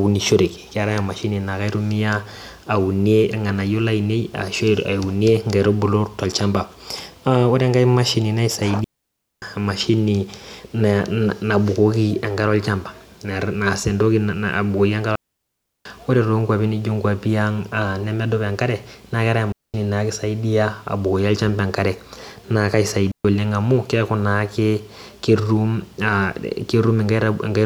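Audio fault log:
8.84–9.42 s, 15.16–15.85 s, 19.52–19.74 s, 23.12–23.25 s: digital wireless dropout. The speech cuts to near silence for 0.58, 0.70, 0.22 and 0.13 s. The receiver lost too much data and muted with a very quick fade. Each gap is clean, with no noise burst.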